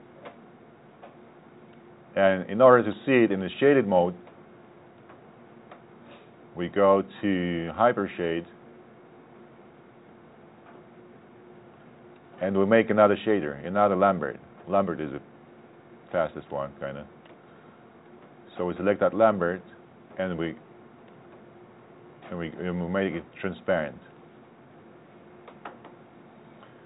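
There are no technical faults to describe, in time order or otherwise; the sound simply comes through the G.711 call path with nothing above 4 kHz.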